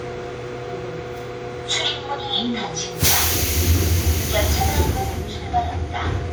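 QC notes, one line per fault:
Throughout: generation loss. The sound has that swirly, hollow, smeared quality, with transients blurred, more than a single lossy pass would leave. It's likely from being decoded and re-encoded about five times through an older WMA-type codec, with each pass quantising again on a shifted frame grid so the noise piles up. The content reaches up to about 20.1 kHz, which fits a bitrate around 96 kbit/s rather than a heavily starved one.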